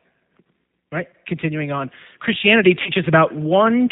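From the start, the speech carries G.729 codec damage. The spectrogram shows nothing above 4 kHz, and the rebuilt speech sounds rough and slightly synthetic. That fits a G.729A stream at 8 kbit/s, modelling each 10 ms frame from a filter, pitch and a few pulses.

From 0.9 s to the end, automatic gain is rising: the gain control judged the input too quiet and turned it up. Voice and background swell together by about 10 dB, and the waveform envelope widens steadily rather than jumping.

At 2.82 to 2.91 s, VoIP packet loss is concealed by the speech codec. About 40 ms went missing, which fits two lost 20 ms packets. The decoder stretched its last pitch and filter into fading sound, shown as flat, smeared energy on the spectrogram and a shrinking waveform before the speech recovers.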